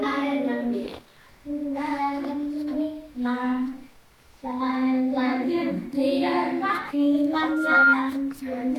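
Loudspeaker feedback squeal sets in from 7.48 to 7.96 s: the microphone is picking up its own loudspeaker, and at 1.4 kHz the loop gain tops unity, so a single pure tone swells over roughly a third of a second to about 10 dB above the sound.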